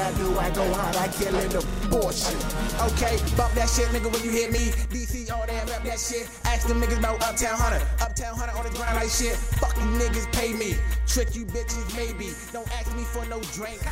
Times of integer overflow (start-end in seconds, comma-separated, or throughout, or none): none